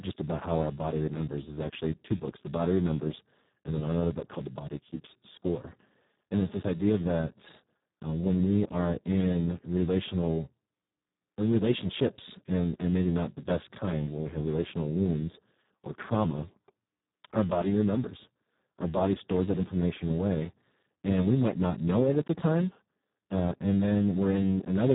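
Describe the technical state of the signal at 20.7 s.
At 20.7 s the speech carries heavy Speex codec damage, present for the whole clip: starved of excitation bits, consistent with roughly 4 kbps, it sounds hoarse and noisy. A spectrogram shows nothing above 3.8 kHz.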